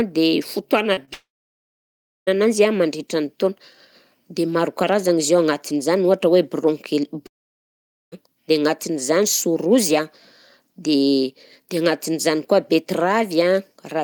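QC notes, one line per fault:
0.93–0.99 s and 1.05–1.09 s, short concealed packet loss: About 40 ms and then about 20 ms of audio never arrived in time. The receiver filled each gap by extending the preceding sound for roughly 30 ms and then blending back into the real signal. Each gap comes through as a brief smear or wobble rather than a clean cut.
1.13–2.29 s and 7.27–8.14 s, long network dropout: The audio stops for over a second and then for under a second. Each gap is likely a network stall in which the stream stopped arriving. The decoder covers only the first instant with a fading continuation of the last sound. After that it is silent, for about 1.0 s in the first gap and 0.83 s in the second. The audio returns at "ananjy an" after the first gap, and nothing from either gap is replayed.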